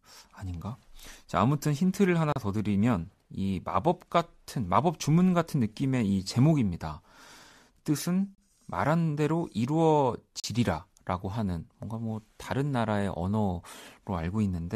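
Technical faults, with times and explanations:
2.32–2.36 s, 8.35–8.38 s, 10.40–10.44 s, 12.44 s: gap between stream segments. Hard-edged silent holes of about 35, 30, 38 and 7 ms are inserted where timestamps of adjacent segments fail to meet. Their spacing fits 2-second segments. The player pads each hole with silence, so no audio is lost.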